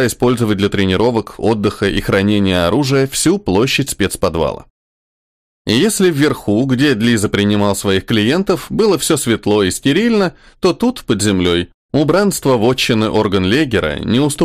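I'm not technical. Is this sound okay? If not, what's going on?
No, there's hard clipping all the way through. The sound was pushed louder than the recording chain could handle, so the loudest peaks got sliced off flat. Only a small share of moments hit that ceiling, but each one adds a brief harsh crackle.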